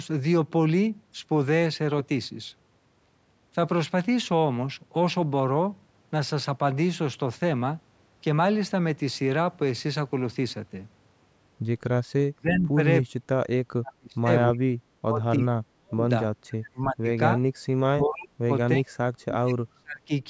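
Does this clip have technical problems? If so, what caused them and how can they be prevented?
Yes. Speech suppressed in double talk: the voice drops by up to about 40 dB or breaks up at 12.33–12.78, 13.11–13.35, 13.76–16.05, 16.47–17.43, 17.92–18.93 and 19.25–20.12 s. This is likely the echo canceller attenuating overlapping speech it treated as echo. A headset or better double-talk detection prevents it.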